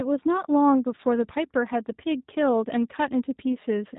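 G.729 codec throughout: speech rebuilt from a vocal tract filter and sparse pulses, cut above 4 kHz, sounding plainly rough and synthetic, fitting 8 kbit/s.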